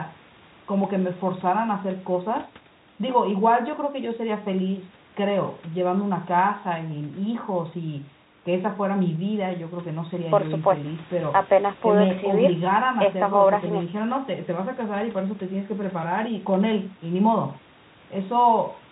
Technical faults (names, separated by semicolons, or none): none